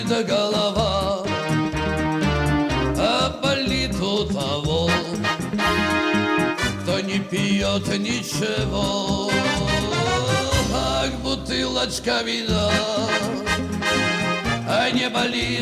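Listening through the recording, nothing stood out as a technical problem at any point.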